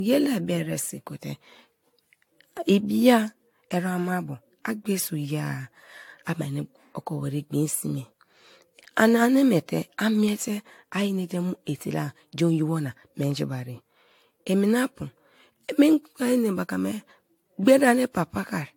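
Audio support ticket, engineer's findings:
Generation loss across the whole speech clip: swirly, hollow, smeared attacks, no content above 18.7 kHz. Likely repeated AAC-LC re-encoding, around seven passes; worse than a single 96 kbit/s encode would sound.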